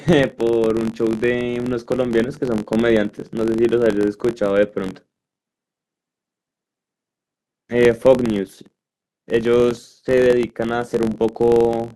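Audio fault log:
Throughout: filter restarted on every block. Each block starts from silence, adding a tick at about 46.9 Hz, which fits a 1024-sample block. Unlike steady mains hum, this buzz swells and fades with the speech level and vanishes in pauses.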